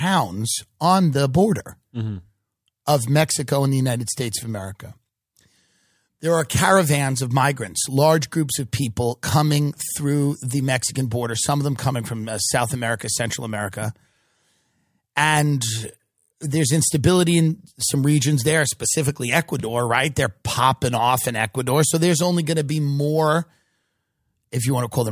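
Listening to this speech recording, nothing technically amiss stood out at any point.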